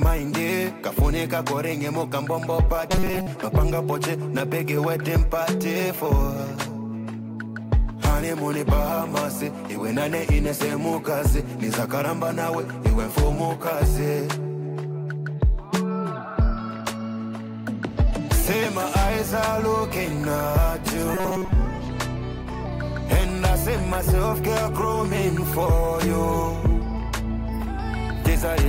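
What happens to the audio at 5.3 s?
Nothing goes wrong at 5.3 s; the audio there is intact, with no dropout, click, distortion or other fault.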